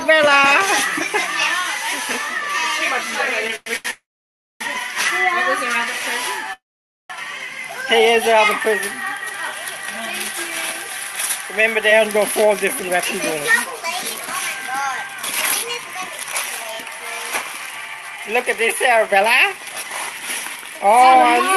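From 3.47 to 3.87 s the sound drags and catches four times, with brief held-over fragments filling 211 ms of that span (the longest gap is 106 ms). This is repeated stalls (stutter): packets arrived late or too slowly, so the jitter buffer kept running dry and the receiver stretched the last sound until more data came, losing nothing.

Right after, from 3.91 to 4.62 s, the audio hangs with a short fading continuation and then about 0.59 s of silence before resuming exactly where it stopped. The same happens from 6.54 to 7.12 s, with about 0.51 s of silence within 0.56 s of filled time. Both are a call audio freeze, likely caused by packets held up in transit emptying the jitter buffer, so a gap is inserted rather than anything being cut.

From 13.40 to 16.79 s the audio runs hurried at 107% speed with unchanged pitch. From 17.42 to 21.14 s it runs at 109%. This is a jitter buffer speed-up: with too much audio queued, the receiver repeatedly trimmed pitch-period-sized slices, removing roughly 0.2 s and 0.3 s to cut the delay. 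Throughout, the call codec adds its coding noise, and the top end stops near 12 kHz.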